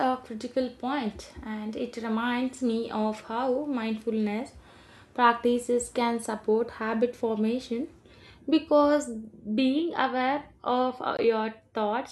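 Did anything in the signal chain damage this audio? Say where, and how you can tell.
Yes. At 11.17 s, right after "aware of", the speech drops out for about 18 ms, with edges smeared by the codec, then resumes where it stopped. This gap at a join of encoded pieces comes from separately encoded segments spliced untrimmed, leaving encoder start delay and final-frame padding in.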